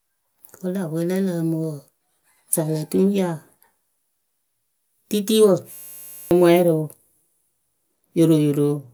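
From 5.72 to 6.31 s the speech becomes a system hang loop: the driver stalled while the hardware replayed one 10 ms buffer, giving a steady 100 Hz buzz and losing about half a second. The waveform repeats identically, and the spectrogram shows flat harmonics spaced 100 Hz apart.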